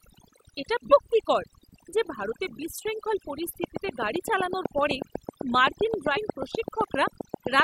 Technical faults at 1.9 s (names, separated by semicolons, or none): overdone noise removal